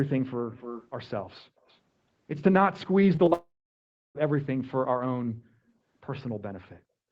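From 0.52 to 0.88 s a faint delayed copy of the speech trails about 295 ms behind, with a fainter scrap at 1.68 to 1.77 s, likely an echo leak where a loudspeaker's echo canceller let some sound return. At 3.15, 3.25 and 3.29 s brief smears appear, short concealed packet loss where the receiver patched each missing 20 ms with continued sound. From 3.33 to 4.17 s the audio turns to a fading buzz or hiss and then about 0.69 s of silence, likely a long network dropout, before resuming without the lost part.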